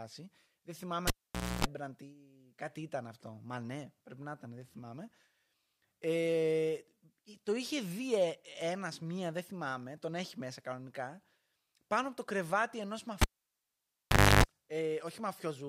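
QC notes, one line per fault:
1.07–1.65 s, cable pulled and plugged in: a live lead is unplugged for about 0.52 s; pop, near silence, then about 0.28 s of 60 Hz mains buzz as the tip touches, pop, sound resumes at "ή κάτι ήταν αυτό".
13.21–14.44 s, cable pulled and plugged in: after "από το κρεβάτι ενό" the lead comes out for about 1.17 s; pop, silence, about 0.3 s of 50 Hz mains buzz at reinsertion, second pop.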